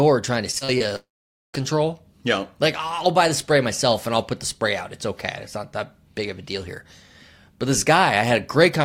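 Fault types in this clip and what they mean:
Repeated packet loss (robotic sound): Between 0.51 and 0.82 s the audio breaks up four times in quick succession, the longest hole about 37 ms. Each gap is bridged by stretching the preceding sound, so roughly 28% of that span is synthetic filler. It sounds choppy, with pieces missing. On a spectrogram, short smeared vertical patches with flattened harmonics interrupt the texture. The waveform shows brief repeated-looking segments where natural variation stops.
Long network dropout: From 0.96 to 1.55 s the sound cuts out for about 0.58 s, likely because nothing reached the receiver over that stretch. A buzzy continuation of the last sound dies away within about a tenth of a second. Roughly 0.48 s of silence follows before the audio resumes partway on, with the missing portion simply gone. A spectrogram shows a fading smear and then a blank band. 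The waveform flattens to near zero.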